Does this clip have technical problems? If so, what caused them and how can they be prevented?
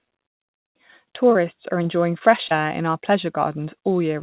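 Yes. At 1.33 to 1.37 s, a short concealed packet loss leaves one brief smear where about 20 ms went missing and was patched by extending the preceding sound, unlike a hard dropout's silence. A steadier network path or a slightly deeper jitter buffer would let that packet arrive in time.

From 1.83 to 2.61 s, repeated packet loss (robotic sound) brings five gaps, none longer than 20 ms, patched in quick succession into a choppy texture rather than one isolated blip. Forward error correction or packet redundancy, plus fixing the congested or lossy link, would prevent this run of losses.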